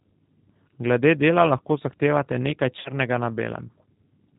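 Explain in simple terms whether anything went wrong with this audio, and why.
G.729 codec, throughout the clip: the speech passed through a low-rate phone-call codec that doesn't send the actual sound. Instead it sends a rough recipe: the shape of the voice, its pitch, and a few pulses for each tiny slice of time. The listener's end rebuilds the speech from that recipe. Nothing above 4 kHz survives, so the voice sounds muffled and clearly a little rough and synthetic, though still understandable.

VoIP packet loss concealed by the speech codec, from 2.79 to 2.91 s, right after "dela lahko zahtevate nekaj": a 60 ms stretch of audio never arrived, which fits a few lost packets. The decoder filled the gap by repeating its last guess at the voice and turning it down step by step, so the sound smears into a brief buzzy tone or coloured noise that fades. Because each rebuilt slice depends on the one before, the voice stays weak or distorted for a moment after the audio returns.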